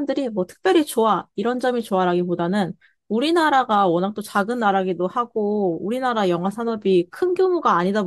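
A receiver not locked to the sender's clock slips one sample at a time, causing word clock ticks: about seven sharp clicks, roughly 1.5 s apart, from 0.29 to 7.81 s.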